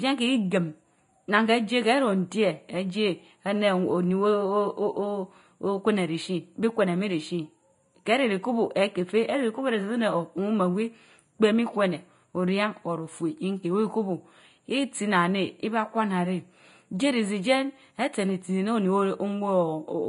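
Right from the start and all the way through, the speech has a hollow, slightly phasey edge. That's channel delay (comb filtering). One channel runs a few samples late, only a fraction of a millisecond, and when the two are folded to mono the shared signal cancels at evenly spaced frequencies. With a gap that small, the first notch sits up around 5 kHz, so the upper presence and sibilance sound thinned and oddly dull rather than obviously echoey.

On top of that, the whole clip is hissy and grainy, with the top end stopping dead at about 10.6 kHz. That points to Vorbis compression at a fairly low bitrate, likely somewhere around 30 kbps. The encoder lowered its cut-off and quantised what treble was left so coarsely that the fine detail turned into noise-like grit. Consonant attacks come out smeared and voiced sounds have a roughened texture, so the codec damage is plainly audible.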